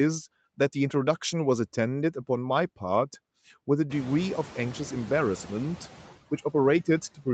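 Speech recorded over a call, with noise suppressor artifacts throughout. The suppressor pulls steady background down by about 14 dB, frame by frame. In the pauses the noise sinks, and under speech it swells back. The room noise rises by about 23 dB at around 4 s, leaving it only about 19 dB below the speech. On a spectrogram the noise floor darkens between phrases. On the waveform the floor visibly pumps with each utterance. Nothing shows above 8 kHz, which fits the wideband Opus call path.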